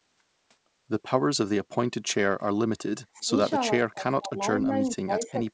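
Speech suppressed in double talk at 3.14 to 3.31 s and from 3.76 s onward: the sound dips around 25 dB, then 30 dB, likely from an echo canceller ducking the talker during double talk.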